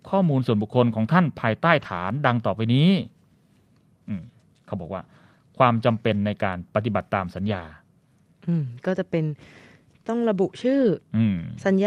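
Lost packets rebuilt from error correction occur at 1.81–1.87 s, 7.43–7.61 s and 10.69–10.87 s in this speech, which passes through an Opus call path. Packets were lost, but each following packet carried a low-bitrate spare copy, and the decoder played that instead, so nothing drops out. The first patch is about 40 ms long and the second and third about 100 ms each. They sound briefly rougher and noisier than the surrounding speech.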